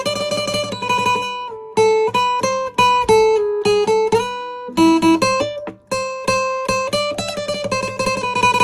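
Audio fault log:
Nothing to log here; no faults turn up anywhere in the clip.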